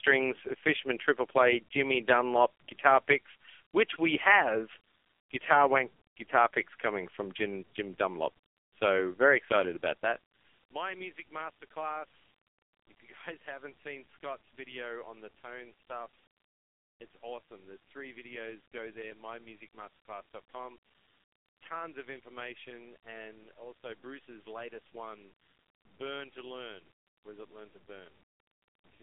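AMR narrowband mobile codec damage runs through the whole clip. The speech has been squeezed through a 2G/3G-style phone codec that rebuilds the voice from a compact vocal-tract model and a sparse pulse excitation. The damage is heavy, with a buzzy, synthetic quality that points to one of the lowest AMR-NB modes, around 5.15 kbps. The band is confined to a telephone line of roughly 300 Hz to 3.4 kHz, with nothing audible above 3.5 kHz, so the sound is thin and muffled.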